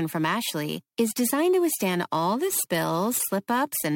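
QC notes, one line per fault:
Throughout: crude rate conversion. The speech was moved from 48 kHz to 44.1 kHz by picking the nearest sample with no filtering. The resulting error, around 20 dB below the signal, repeats in a rate-set pattern and adds a gritty, inharmonic fizz tracking louder and brighter passages.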